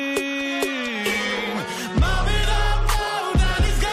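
At 3.66 to 3.68 s, near the end of the clip, compressed frames are skipped. The decoder drops whole blocks of encoded audio, either missing from the file or rejected as damaged, so playback jumps ahead. The gap is about 50 ms, consistent with roughly two frames of 23.2 ms each. The sound lurches slightly forward in time.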